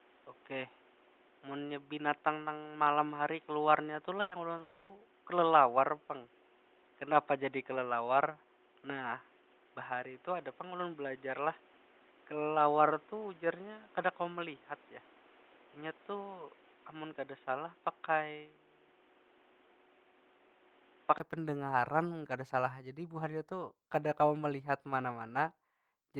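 From the start until 21.2 s, the speech sounds dull and boxy, with nothing above 3.8 kHz. A low new background noise sits roughly 30 dB under it. This is likely an input switched to a poorer device. The band opens up after a 20 ms silence.

At 4.21 s comes a burst of packet loss lasting about 0.12 s. The receiver stretches the last sound for 100 ms, and that sound fades as a held buzz or hiss. The speech then jumps ahead, and 100 ms of it is gone.

From 4.57 to 4.61 s there is a short concealed packet loss. A brief smear or wobble covers the 20 ms that never arrived in time. The filled sound is continued from the previous moment before the real audio returns.

Straight after, from 4.61 to 4.91 s, the sound holds and fades for about 280 ms without going fully silent. This is likely a long network dropout. When the speech resumes, that stretch is missing.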